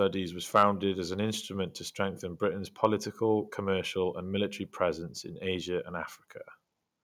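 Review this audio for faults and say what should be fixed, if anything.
From 0.55 to 0.63 s speech crackles as its peaks flatten: microphone overload, likely input gain pushing the converter about 3 dB past full scale. To prevent it, lower the microphone input gain so the loudest syllables stay several decibels below full scale.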